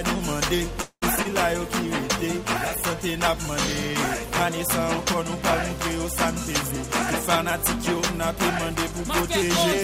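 From 0.81 to 1.04 s the sound stalls into a fading buzz and about 70 ms of silence, then resumes where it stopped. This is a call audio freeze, likely from delayed packets emptying the jitter buffer: nothing is lost, just delayed. Short concealed packet loss follows at 1.16 to 1.19 s and 1.23 to 1.27 s, each a brief smear where about 20 ms never arrived, patched over and then blended back into the real audio. From 1.44 to 4.20 s a call bitrate drop from 96 to 28 kbps makes the sound coarse and muffled, a sustained loss of detail rather than a momentary break.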